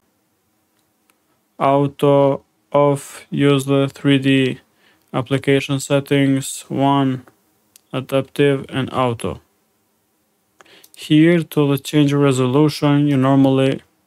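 No technical faults are audible.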